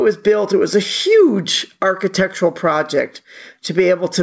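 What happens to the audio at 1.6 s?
At 1.6 s the speech is caught in gain pumping that runs through the whole clip: the level ducks by around 10 dB under louder syllables and recovers in the gaps, likely from a fast limiter fighting excessive input gain.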